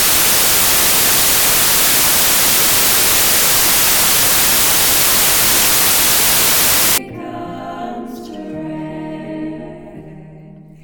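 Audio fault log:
0.0–6.98 s: samples built from the wrong bytes. The reader misassembles each sample's bytes, so the rapidly changing low-order bits land in the high-order position and dominate every value. The result is loud, harsh broadband noise.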